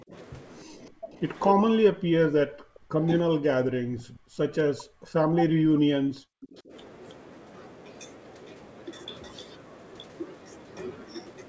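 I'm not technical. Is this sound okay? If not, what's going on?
No. Two separate call problems show up.

Speech suppressed in double talk: the voice dips, goes dull or cuts out in pieces at 0.02 to 0.13 s, 0.64 to 1.16 s, 1.55 to 3.06 s and 3.23 to 6.72 s, with the longest and deepest losses in the last two stretches. This was likely the call's echo remover turning everything down while both people talked at once. It differs from a bad connection because the sound shrinks or thins rather than stuttering or garbling.

Echo leak: a faint repeat of the sound comes back about 0.3 seconds late at 1.35 to 1.42 s, 4.0 to 4.17 s and 6.42 to 6.61 s. The later two are clearer than the first. This is likely a loudspeaker's sound slipping past the echo remover and being sent back. Room reverb blurs the sound straight away, but this is a separate copy that arrives noticeably later.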